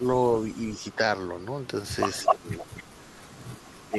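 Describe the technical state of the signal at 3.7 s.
A faint, delayed copy of the speech trails behind it from 3.61 to 3.86 s, sitting far below the main signal and arriving about 255 ms late. This is an echo leak, likely from a far-end loudspeaker whose echo canceller let part of the microphone pickup through and sent it back.

Overlapping this, from 3.67 to 3.97 s, the speech itself dips by roughly 10 dB at its deepest, in pieces totalling around a fifth of a second. This is speech suppressed in double talk, likely because the echo canceller, faced with both sides at once, turned down the talker along with the echo.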